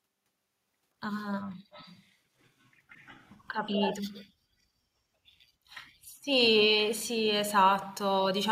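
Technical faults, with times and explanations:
1.72–2.05 s, 2.63 s, 2.89–3.97 s and 4.13–4.24 s: echo leak. A delayed copy of the speech trails the original by 185 ms. It is about 25 dB down in the first stretch, about 40 dB down at 2.63 s, strongest at about 10 dB down through 2.89–3.97 s, and about 30 dB down at the end. The likely cause is a far-end loudspeaker whose echo canceller let part of the returning sound through.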